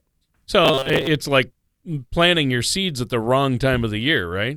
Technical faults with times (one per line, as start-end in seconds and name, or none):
0.65-1.07 robotic sound from repeated short buffers